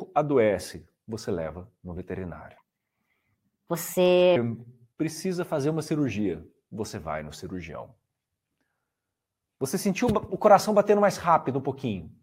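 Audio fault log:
2.58–4.36 s, section at the wrong speed: this stretch runs about 1.38 times too fast, so timing is compressed and pitch rises by roughly five semitones, snapping back at 4.36 s. Speed and pitch shift together, likely from playback or editing against a mismatched clock.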